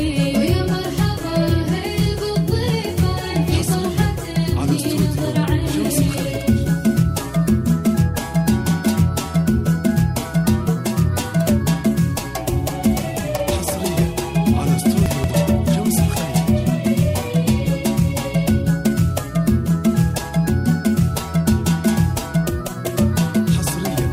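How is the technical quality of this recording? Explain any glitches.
The recording has one glitch, at 15.06 to 15.3 s: chunks out of order. A 60 ms chunk was delivered three chunks late and played after the material that should follow it. Nothing is missing, but that quarter-second sounds jumbled, with three hard joins.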